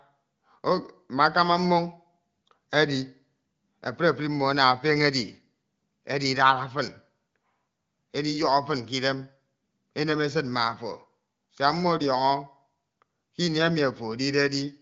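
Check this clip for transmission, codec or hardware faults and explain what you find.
No faults turn up in the speech, which carries the band-limited sound of an AMR wideband (HD Voice) link with nothing above 7.6 kHz, a character that fits coding at around 18.25 kbit/s.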